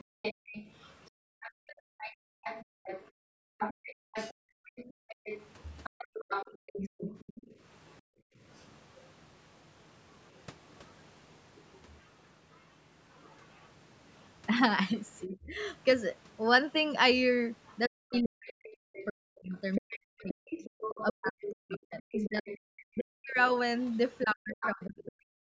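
Right from the start, 0.0 to 7.56 s, there's a second voice sitting under the talker, only about 10 dB down. That's the other side's voice leaking through: most likely the far end playing on a loudspeaker and the echo canceller not scrubbing all of it out of the mic, so you get this voice riding along underneath.

Overlapping that, from 0.04 to 8.4 s, the room sound keeps ducking. That's background gated by the echo canceller. While the loudspeaker is active it clamps the mic down, as deep as about 40 dB, so the background drops away, roughly two seconds' worth in total, then comes back when the canceller releases.

Between 3.17 and 7.0 s the talker's own voice starts getting eaten too. That's speech suppressed in double talk, likely because both sides were talking at once and the canceller couldn't tell its own talker from the echo, so it pulled everything down, up to around 40 dB. About a second of the voice dips or breaks up in pieces.

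From 11.56 to 14.24 s the leak is back, but it's very faint, something like 35 dB under the speech, just a ghost in the background.

The rough stretch is the end. From 17.66 to 25.04 s the far voice is leaking through again at around 10 dB below the talker. Across 15.26 to 25.41 s the double-talk suppression kicks in hard, with about five seconds of the talker's voice ducked by up to roughly 40 dB, chopped and dulled, likely while the other side is going. The band tops out at 8 kHz throughout, which is just the call's mic processing.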